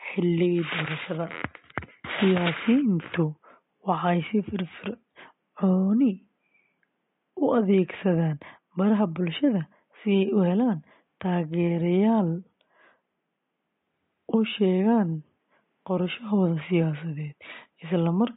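Throughout, the speech sounds watery with chirpy s sounds. A spectrogram shows a flat treble ceiling and flickering holes, likely from MP3 compression near 32 kbps.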